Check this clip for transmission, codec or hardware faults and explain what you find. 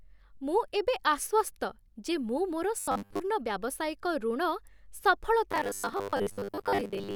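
Two stretches of robotic sound from repeated short buffers affect this speech, from 2.80 to 3.20 s and from 5.52 s to the end at 7.15 s. In both, the speech turns into a stiff, metallic buzz at 100 Hz that loosely tracks the syllables. The likely cause is audio arriving too slowly, so a fragment of about 10 ms is replayed to fill the gaps. Most of the real signal is skipped, and the repetition rate sets the fixed buzz.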